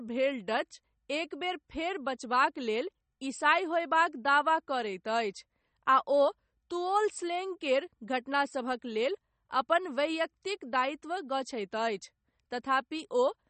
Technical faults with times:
0.00-13.49 MP3 compression

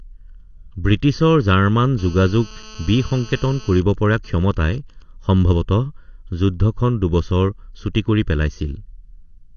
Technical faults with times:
0.00-9.57 channel delay (comb filtering)
0.00-9.57 AAC compression
1.99-3.78 GSM phone buzz
3.78-5.02 GSM signalling bursts

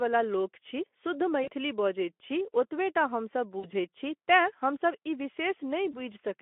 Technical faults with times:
1.43-1.48 VoIP packet loss concealed by the speech codec
3.59-3.67 VoIP packet loss concealed by the speech codec
5.91-6.00 VoIP packet loss concealed by the speech codec

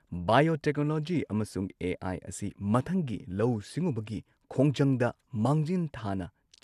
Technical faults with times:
0.00-6.63 MP2 compression

